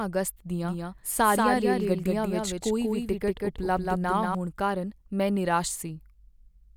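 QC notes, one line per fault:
0.63 to 4.35 s, doubled audio track: a second copy of the speech trails the original by roughly a fifth of a second, sitting about 5 dB down, so everything gets a dry, slappy echo with no room tail to it. It kicks in and drops out abruptly, clearing just before "ਕਾਰਨ ਮੈਂ". Likely cause is the same feed getting picked up twice, once through a slower path, so the two copies land out of step.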